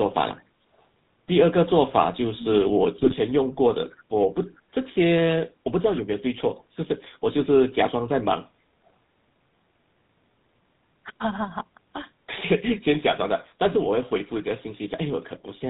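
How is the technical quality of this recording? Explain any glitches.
The recording is clearly degraded: the speech has a rough, buzzy coding sound from start to finish, and there is one short glitch near the three-second mark.

Throughout, the voice has a gravelly, reedy buzz and a muffled top end with nothing above 4 kHz. That is the character of the GSM full-rate codec, at a rate that fits the 13 kbps full-rate standard. The codec rebuilds speech from a vocal-tract model excited by a sparse, regularly spaced pulse train, and that coarse excitation is what turns the voice buzzy.

From 2.98 to 3.15 s the speech breaks into a brief gargling squawk with sudden jumps in level. These are GSM bit errors. Corrupted bits reached the decoder and scrambled the filter, pitch and gain values it relies on, so the spectrum warps and the loudness spikes for each damaged frame. The length of the burst fits about eight consecutive frames being hit, from an error rate of roughly one percent.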